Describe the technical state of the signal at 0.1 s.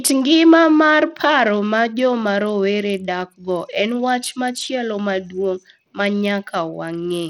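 At 0.1 s, as through the whole clip, the speech has a gritty, coarsely quantised edge, with nothing above 18.1 kHz and a flickering treble. That's likely Bluetooth SBC compression, which fits a small bit pool at around 80 kbps leaving the top sub-bands short of bits.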